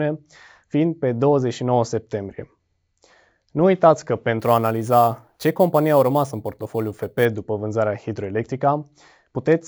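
From 4.39 to 7.25 s, just after "uitați că", the speech was upsampled by sample-and-hold, each sample simply repeated with no smoothing filter, which fits a 16 kHz source raised to 44.1 kHz. This imaging folds a mirrored copy into 8 to 16 kHz, about 23 dB down, heard as a bright metallic fizz tracking the speech.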